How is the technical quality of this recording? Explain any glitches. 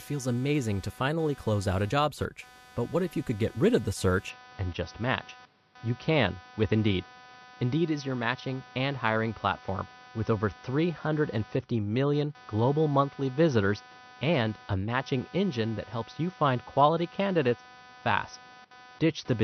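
The recording has three technical faults: a buzz that runs through the whole clip, one brief dropout near the start, and a lasting drop in quality from about 4.30 s onward.

Computer activity noise runs through the whole clip as a buzz pulsing at around 300 Hz, roughly 25 dB below the speech. The computer's processor, graphics card or mouse draws changing current, and those load changes disturb the ground that the audio circuit shares with it. The result is a buzzing texture that jumps up and drops back with the machine's activity rather than the speech, so it stays present through pauses as well as talking.

Compressed frames skipped: at 1.90 s, just after "finally close out a", about 20 ms of audio is missing, which fits a single lost frame of 21.3 ms. The decoder either never received that frame or rejected it as damaged, so playback jumps straight to the next one, and the speech skips ahead by about 20 ms.

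Input switched to a poorer device: from 4.30 s, right after "get rid of the", to the end of the clip, the sound turns duller and boxier. Nothing above 6 kHz remains, and a new background noise appears roughly 40 dB below the speech. The loudness stays about the same, and there is no silent gap at the change. The likely cause is the system swapping mid-recording to a narrower-band input, such as another microphone or a headset call profile.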